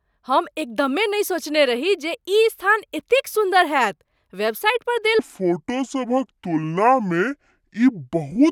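From 5.19 s to the end, the speech turns into a section at the wrong speed. It plays at 0.63 times its proper rate. Speed and pitch drop together, so the voice suddenly sounds deep and dragging, about seven semitones lower. Syllables stretch out and the delivery feels sluggish. The change is abrupt, not gradual. The likely cause is that this stretch was played back against the wrong clock, slower than it was recorded.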